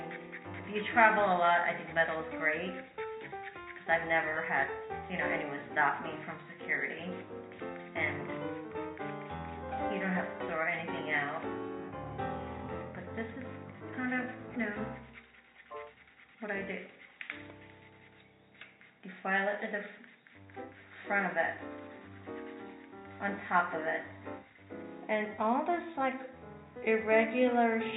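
There are no technical faults to place in time; the audio carries the narrow band of a G.711 A-law call path, with nothing above 4 kHz.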